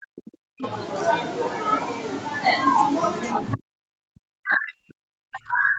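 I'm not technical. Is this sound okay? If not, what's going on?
No. The voice drops almost to silence from 0 to 0.64 s and again from 3.55 s to the end. This is likely speech suppressed in double talk: the call's echo canceller mistook the talker for echo while both sides spoke at once, and muted the talker.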